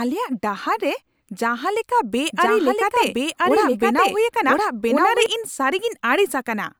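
Speech with a doubled audio track from 2.32 s to 5.26 s: a second, full-band copy of the speech runs about a second behind the original at roughly the same level, so two overlapping streams are heard at once. The copy carries no decay or room colour and cuts in and out abruptly. It is likely caused by a slower second capture path or an edit holding two out-of-step copies. On a spectrogram the harmonic patterns repeat, shifted right by about a second, and the waveform shows denser, overlapping envelopes with hard edges at both ends.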